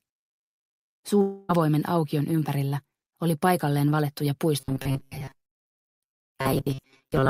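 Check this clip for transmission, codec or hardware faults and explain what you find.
Two faults are present, both likely caused by network delivery problems.

From 1.21 to 1.51 s there is a long network dropout. About 0.28 s of audio never arrives, and the receiver fills almost the whole gap by extending the last sound as a fading buzzy hiss rather than leaving silence. Audio resumes afterwards with that stretch missing.

From 4.6 s to the end, the audio has robotic sound from repeated short buffers. Delayed packets are covered by looping a fragment of about 7.5 ms, which imposes a fixed 134 Hz metallic buzz. Most of the real audio in this section is skipped, leaving a rigid tone that only loosely tracks the original sound.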